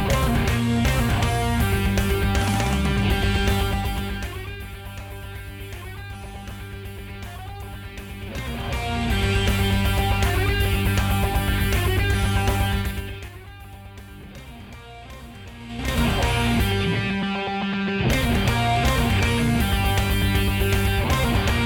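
Zipper noise appears twice in the audio. From 12.73 to 13.38 s the level falls by around 20 dB in audible 3 dB steps, and from 15.60 to 15.98 s it rises by a similar amount in 5 dB steps. Both ramps move in roughly ten increments per second. The gain is being updated in coarse unsmoothed jumps rather than interpolated per sample, so each step leaves a small click and the moves sound like a ticking zip.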